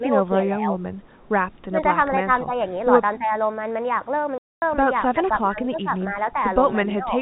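Right from the start the speech gets ducked in short bursts: 0.0 to 0.12 s, 0.45 to 0.77 s, 1.69 to 1.79 s, 2.45 to 2.51 s and 3.18 to 3.32 s. Most are shallow dips of about 5 dB, but the one near 1.7 s pulls down about 15 dB. That pattern points to speech suppressed in double talk, most likely an echo canceller losing track while both ends talked and clamping everything down.

At 4.38 s there's a hard hole lasting 240 ms before the sound snaps back at 4.62 s. That's packet loss filled with silence. Nothing was concealed, so you get dead air with hard edges, and the length fits eight lost packets of 30 ms each.

The ducking comes back harder later on. From 5.12 to 5.91 s it dips about 15 dB, and from 6.86 to 7.16 s about 10 dB, both under the same narrow 4 kHz telephone band throughout.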